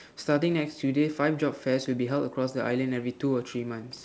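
Nothing in the speech stood out as a fault on listening, with the call path's G.722 coding at 64 kbps holding the sound to the band below 8 kHz as expected.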